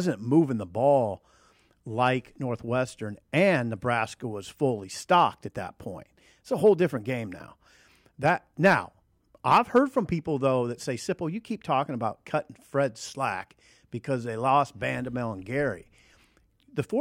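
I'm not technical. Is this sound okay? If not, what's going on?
Yes, nothing wrong can be heard in this recording.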